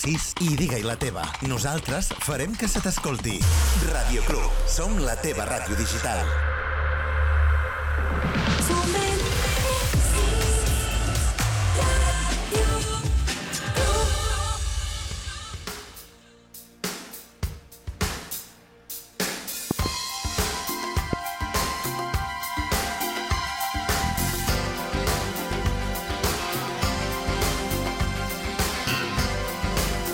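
A loud pop lands at 4.30 to 4.33 s, a double pop at 19.71 to 19.88 s, and a single one at 21.13 to 21.15 s, each about 15 dB above the surrounding sound, which continues underneath. These are likely voltage spikes from a plug, switch or static discharge.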